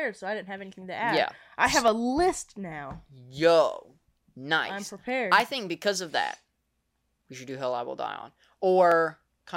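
From 0.47 s to 8.92 s the speech carries a regular tick about every 0.70 s, some fifteen in all. These are clock drift buffer slips, likely from two devices running on independent clocks that differ by around 300 ppm. Each time the buffer between them overflows or runs dry, a handful of samples is dropped or repeated. On a waveform each slip is a small step in the signal. On a spectrogram it is a thin vertical broadband line, evenly spaced.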